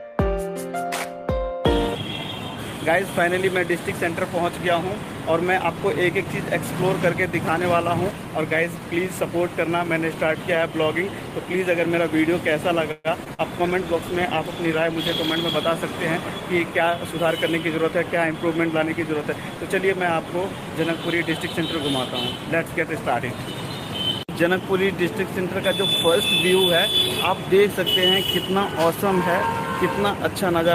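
At 12.91 s the audio stalls for 130 ms. The last sound is stretched into a fading buzz or hiss, and then the audio resumes exactly where it broke off, with nothing skipped. This is a call audio freeze. The likely cause is packets held up in transit, which let the jitter buffer run dry. The receiver filled the wait with synthetic continuation, which adds about 130 ms of delay to everything after it.

From 13.24 to 13.29 s there is a short concealed packet loss. About 40 ms of audio never reached the decoder in time. The receiver covered it with only about 14 ms of extrapolated sound before blending back in, so the result is a brief smear or wobble and a small jump forward. This also takes back roughly 30 ms of the delay built up by the freeze.

Right after that, from 13.34 to 13.41 s, comes a burst of packet loss. Several packets in a row were lost or arrived too late to be played, and 40 ms of audio is gone. 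The receiver spent about 45 ms continuing the last sound and turning it down, heard as a short held buzz or fading hiss. The audio then picks up further along, with the intervening section missing.

Between 13.60 and 15.66 s a call bitrate drop is audible. The call's bandwidth estimate fell, and the encoder went from 32 kbps to 17 kbps, staying at the lower rate for 1.98 s. At that rate Opus quantises more coarsely and trims the upper frequencies. The sound becomes duller and rough or watery until the bitrate climbs back.

From 16.41 to 18.75 s the audio runs at about 104% speed with no change in pitch. This is a jitter buffer speed-up. After the earlier disruption the buffer held more audio than its target, so the receiver repeatedly cut out short pitch-period segments to shed the excess. Around a tenth of a second is removed in total.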